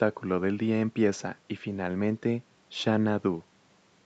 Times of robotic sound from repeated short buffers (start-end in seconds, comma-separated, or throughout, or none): none